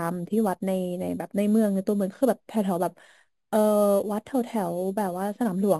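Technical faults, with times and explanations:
Throughout, imaging from sample-and-hold upsampling: a metallic fizz following the speech, from mirror images about 22 dB down at 5.5–11 kHz, left by repeating samples without filtering.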